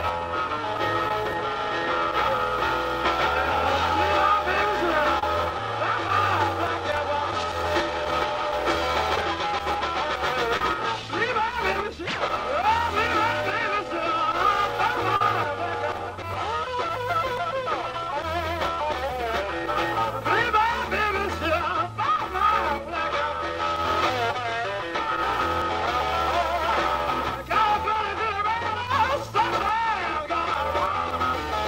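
Short concealed packet loss occurs seven times: at 1.08–1.11, 5.19–5.23, 7.31, 9.16–9.18, 10.57–10.61, 15.16–15.21 and 27.93–27.96 s. Each time, 10 to 40 ms never reached the decoder. The receiver stretched the preceding sound over the hole. Each is heard as a brief smear or wobble.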